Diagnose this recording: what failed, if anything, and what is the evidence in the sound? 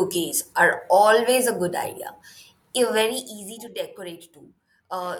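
Zipper noise shows up from 2.97 to 3.34 s: a gain drop of around 15 dB lands in 3 dB stairs, roughly ten a second, each leaving a small tick. That's unsmoothed gain stepping at the buffer stage.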